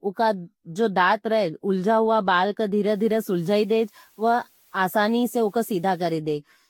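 Generation loss runs through the whole speech clip: smeared, swirly, hollow tone with blurred attacks and nothing above 18.5 kHz, likely from about five Vorbis passes near 66 to 68 kbit/s.

Low bit depth with dither follows from 2.90 to 6.12 s, right after "रहे उलज़ावा बाल का": 9-bit rounding with dither makes a steady, even hiss roughly 35 dB below the speech, without distortion.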